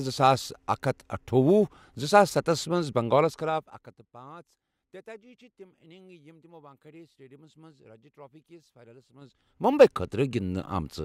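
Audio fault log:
3.16 to 4.10 s and 9.13 to 9.73 s, zipper noise: a rapid ticking, like a zip being pulled, rides on the speech while the level falls by roughly 25 dB in the first span and climbs back by a similar amount in the second. The gain moves in unsmoothed jumps of about 2 dB and then about 4 dB, around ten times a second, and each jump clicks, so the fade comes out as a train of tiny ticks.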